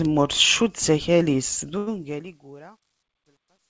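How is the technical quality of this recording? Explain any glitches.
The speech has one audible glitch, a short stall from a late packet, heard over band-limited call audio with nothing above 8 kHz, which fits a G.722 wideband call path.

From 1.78 to 1.89 s, a packet arrived late and the jitter buffer ran dry. The receiver filled the gap by stretching the last sound for about 88 ms, then resumed exactly where it left off, so nothing is lost. The result is a held, slightly buzzy or dipped sound, with everything after it shifted 88 ms later.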